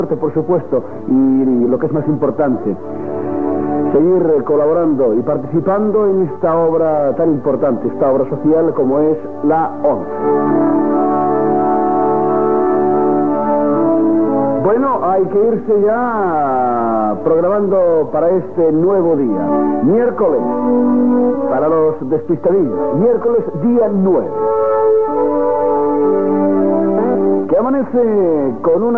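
No technical faults can be heard anywhere in this audio.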